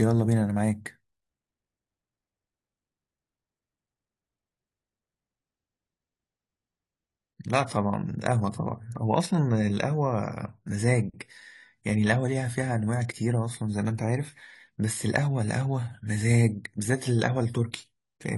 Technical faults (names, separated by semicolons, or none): adaptive stream at a lower bitrate